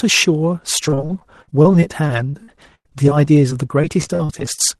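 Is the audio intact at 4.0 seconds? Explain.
No. From 0.75 to 4.61 s, repeated packet loss keeps punching holes in the stream, about three dozen gaps of up to 100 ms each. The decoder patches each one by stretching the preceding sound, so at 4.0 s the speech is choppy and robotic.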